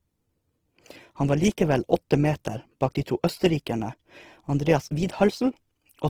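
From start to finish the speech carries a rough, grainy texture: the upper harmonics sound noisy and granular, yet the top end stays present rather than dulled. This is likely Opus compression in its music mode, working at a rate that fits roughly 16 kbps. It preserves each band's energy but fills starved bands with folded or noise-like content. That is why there is grit instead of the watery swirl and gaps of MP3, and no hoarse, muffled narrowing.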